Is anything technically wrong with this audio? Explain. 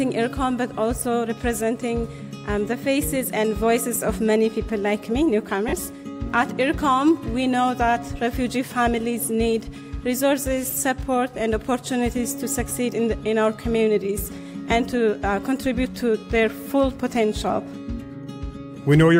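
Yes. There are four short dropouts from lost LE Audio frames, at 3.95 s, 5.69 to 5.73 s, 10.71 s and 12.70 s. Bluetooth LE Audio frames failed to arrive, so the LC3 decoder filled each gap by repeating the last good spectrum with randomised signs. The three brief gaps are each a very short noisy smear, each consistent with one 10 ms frame going missing. The 5.69 s gap is about 40 ms, enough for the repeated spectrum to smear into a noisy blur and begin fading before the sound resumes. The light codec compression heard throughout is ordinary.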